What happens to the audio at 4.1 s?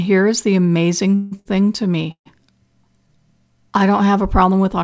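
Nothing goes wrong at 4.1 s: the speech carries on intact through that moment, with only the steady band limit of the G.722 call path, which leaves nothing above 8 kHz.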